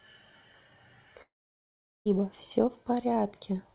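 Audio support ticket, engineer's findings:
Long network dropout, 1.22–2.07 s. Last sound smeared into a fading buzz, then 0.77 s of silence. Resumes at 2.07 s with 0.84 s of audio lost. Likely packet loss at the jitter buffer. Spectrogram shows a decaying band, then a blank gap. Waveform flatlines.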